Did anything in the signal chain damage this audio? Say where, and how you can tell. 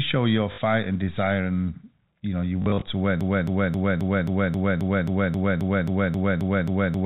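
Yes. Packet loss with the last packet repeated, at the network stage: a 60 ms gap at 0.52 to 0.58 s, between "show your" and "and desire", and 120 ms lost across 2.62 to 2.82 s after "you know your". The receiver replayed stale audio to fill the gaps, and the amounts lost fit 20 ms packets.

Broken-record loop from 3.21 s to the end: a 0.27 s fragment repeats exactly, back to back, fourteen times, and the sound that should have followed is gone. The cause is likely a stalled player or stream resending the last fragment it held.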